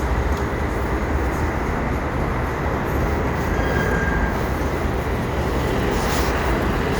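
Nothing technical stands out anywhere in this audio, so there's no fault to point to here.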